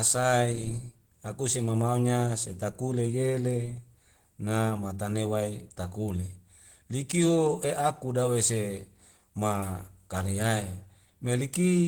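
From start to finish the speech sounds hoarse and somewhat muffled, with a rough, grainy texture and plainly audible codec damage, even though content reaches up to about 20.1 kHz. The likely cause is Opus compression at a low rate, in the range of 16 kbps. There the encoder runs in its hybrid mode, coding the lower band as speech and filling the upper bands with approximated energy, which roughens the voice.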